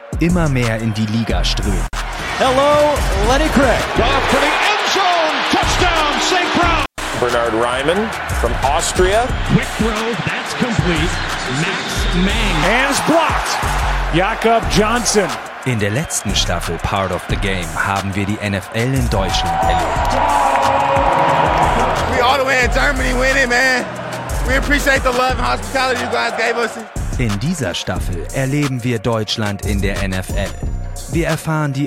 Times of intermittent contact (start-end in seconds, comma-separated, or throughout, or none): 1.86-1.95, 6.82-7.01